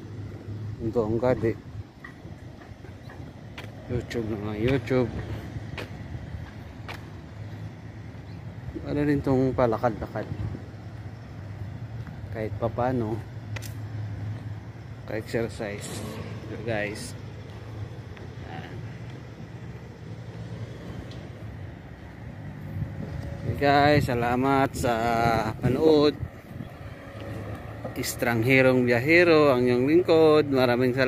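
No technical faults can be heard anywhere in the audio, so there are none to describe in time order.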